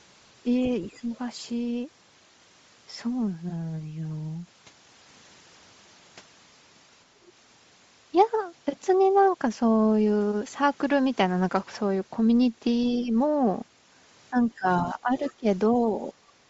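Bluetooth LC3 compression runs through the whole speech clip. The upper spectrum sounds hollowed out and refilled with noise, giving a grainy, breathy edge, plainly audible. This likely comes from a low-bitrate LE Audio link, consistent with 32 kbps and 7.5 ms frames.

Speech suppressed in double talk first appears from 0.6 to 1.11 s. The talker's level dips by something like 15 dB in pieces, most of that half-second. Overlapping with it, from 0.84 to 1.17 s, the other side's voice leaking through is faintly audible, roughly 30 dB under the talker. The likely cause is an echo canceller that could not separate the two voices, so it pulled the microphone down while loudspeaker residue still slipped past.

The pattern repeats around 13 s. From 12.9 to 13.03 s the leaked far-end voice is stronger, perhaps 20 dB below the speech. A brief suppression follows from 13.01 to 13.12 s, a shallow dip of a few decibels.

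From 14.3 to 16.15 s, speech suppressed in double talk returns at length. For most of that stretch the voice sags by around 15 dB, or loses pieces. A short scrap of the other side's voice leaking through surfaces at 15.28 to 15.32 s, deep under the talker.

Background gated by the echo canceller closes the clip at 16.43 to 16.49 s. The room sound drops by about 9 dB for roughly 70 ms as the canceller clamps the microphone during loudspeaker playback, then releases.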